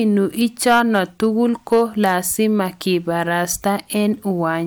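From 0.66 to 1.24 s the speech goes into hard clipping, driven about 5 dB past the limit of a stage that can't pass it. The peaks are shaved flat, which adds a harsh, crackly fuzz. On the waveform the tops sit squared against a ceiling, and the spectrogram shows harmonic smear reaching high up. The same happens again from 1.72 to 2.16 s, about 4 dB over.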